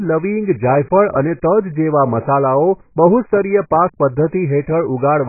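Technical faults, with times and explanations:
Throughout, AAC compression: nothing above 2.5 kHz, so the speech is dull and smeared, likely a very low-bitrate AAC-LC encode cutting the top off.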